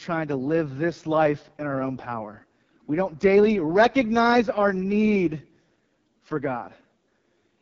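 Throughout, the speech carries heavy AMR wideband (HD Voice) codec damage. It sounds rough and raspy, which fits the codec's lowest rate, about 6.6 kbit/s. The codec models the voice with sparse pulses. Nothing is heard above 7.2 kHz.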